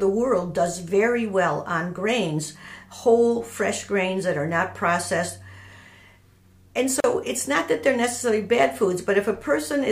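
The clip is a stretch of continuous sound broken once by a gap at a join of encoded pieces. At 7.00 to 7.04 s the sound drops out for about 38 ms. The edges are smeared by the codec. The sound then resumes exactly where it stopped. Separately encoded pieces were joined without trimming the encoder's start delay and end padding.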